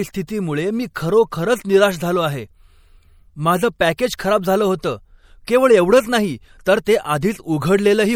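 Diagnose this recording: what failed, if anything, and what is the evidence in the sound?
The codec stage has failed: MP3 compression damage is plainly audible throughout the speech. The sound is watery and swirly, with smeared attacks, as weak frequency lines drop in and out between frames, likely from a starved bitrate around 64 kbps.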